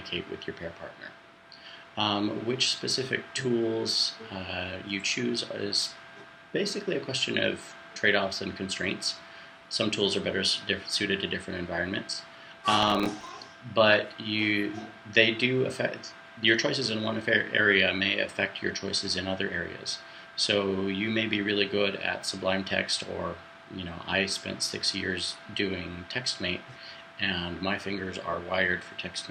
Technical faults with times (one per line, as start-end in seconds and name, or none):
12.83-13.29 processor overload crackle